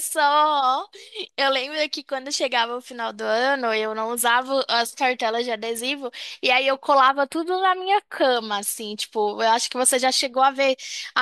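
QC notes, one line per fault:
7.08–8.36 s, channel delay (comb filtering): one channel lags by a few samples, under a tenth of a millisecond, so the mono sum cancels near 7 kHz and sounds hollow and phasey. A spectrogram shows a steady dark horizontal notch there, absent elsewhere.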